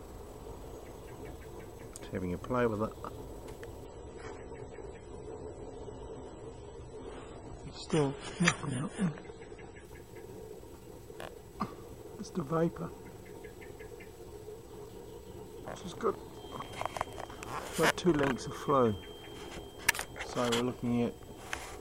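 From 3.85 s to 9.85 s the audio switches abruptly to an adaptive stream at a lower bitrate. The treble is cut off above 10.4 kHz, and the remaining sound turns swirly and smeared with codec artefacts, which fits a step down from about 128 kbit/s MP3 to about 24 kbit/s. There is no gap or dropout at either edge, only a sudden change in quality. That, plus the artefacts, separates it from a simple low-pass filter.

From 16.29 s to the end, a thin, steady whistle at 3.2 kHz sits behind the sound, roughly 25 dB below it, and swells and fades slowly in level. This is a feedback whistle, likely from a loudspeaker-to-microphone loop held right at the edge of feedback, so the tone sustains without building up. Unlike a fixed test tone or interference, its level drifts. Unlike runaway howl, it never builds into a howl.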